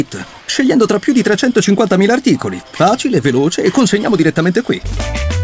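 From 0.40 to 0.48 s, comfort noise in place of the background replaces the real floor with steady, featureless hiss about 3 dB quieter, likely synthetic fill from discontinuous transmission. A spectrogram shows a smooth, uniform 80 ms patch below 8 kHz; the waveform dips.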